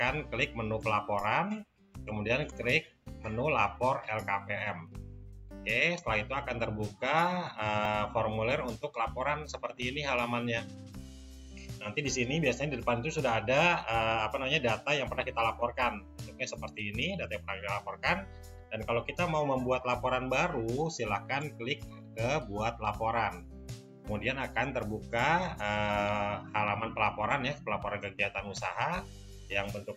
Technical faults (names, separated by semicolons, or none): dropped buffer (overrun)